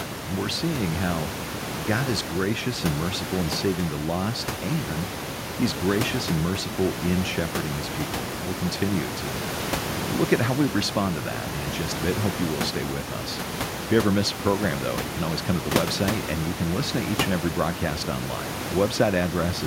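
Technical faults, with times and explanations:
No technical faults can be heard in this speech clip. Room noise sits in the background at about 8 dB below the speech, as part of the recording itself.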